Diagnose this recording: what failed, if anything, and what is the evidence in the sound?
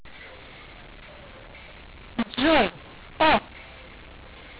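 The fault is a mu-law and A-law mix-up at the codec stage, present for the whole clip: speech encoded as G.711 A-law was decoded as mu-law. Level mapping is scrambled, so speech sounds harsh and pauses fill with hiss. Unlike clipping, the distortion doesn't track loudness, and the band stays within 4 kHz, as expected for 8 kHz telephone coding.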